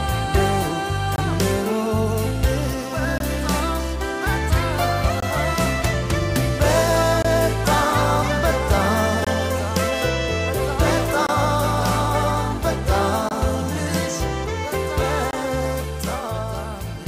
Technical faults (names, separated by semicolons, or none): gap between chunks